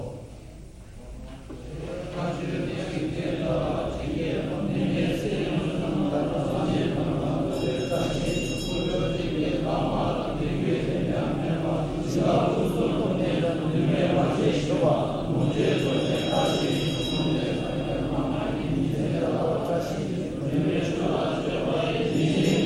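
Listening closely to this recording of everyday sounds, nothing technically wrong stood out at any point.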